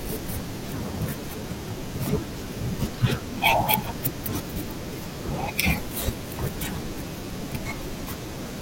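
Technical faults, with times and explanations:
2.26 to 2.37 s, frames out of order: two adjacent blocks of audio, each about 46 ms and consistent with single coded frames, were decoded in swapped order. The short stretch plays its second half before its first, giving a brief garbled flutter. No time is lost.
7.09 to 7.30 s, frames out of order: the same swap happens with longer blocks of about 93 ms each, which suggests pairs of frames. The exchanged halves make a longer stutter.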